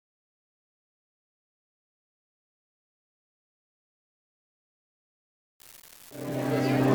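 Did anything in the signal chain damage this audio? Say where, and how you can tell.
Yes: an unreliable data bit at the converter interface. From 5.6 s to the end, equal-sized spikes of about -29 dBFS fizz steadily even through pauses, unlike level-dependent analogue crackle.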